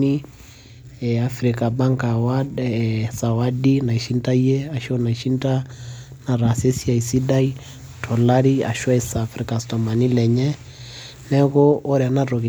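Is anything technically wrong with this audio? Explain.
No, nothing technically wrong can be heard in this speech recording. There are no faults to point to anywhere in it.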